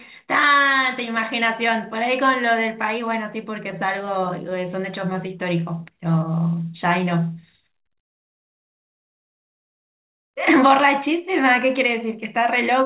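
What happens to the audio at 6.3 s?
At 6.3 s the speech is in the middle of a jitter buffer slow-down, running from 5.43 to 6.56 s. The receiver's buffer was short of audio or had just raised its target delay, so it repeated single pitch periods and bits of pauses to build a reserve. That stretches this stretch by about 76 ms, playing it at roughly 94% speed. Pitch stays the same. Sounds come out drawn out, over speech already capped at 4 kHz by the call codec.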